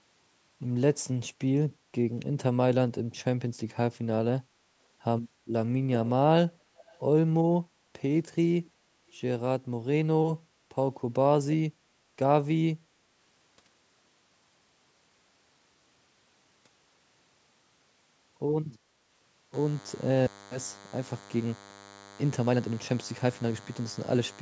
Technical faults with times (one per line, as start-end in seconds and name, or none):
6.76-7.00 echo leak
8.65-8.70 echo leak
19.54-24.41 DECT cordless phone buzz